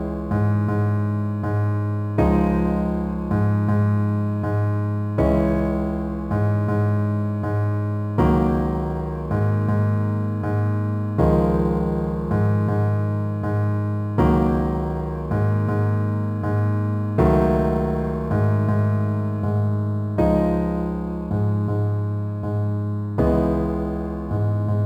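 Crude rate conversion runs throughout the audio: a gritty, inharmonic fizz roughly 40 dB below the signal follows loud and high sounds, which fits 48 kHz material dropped to 44.1 kHz without filtering.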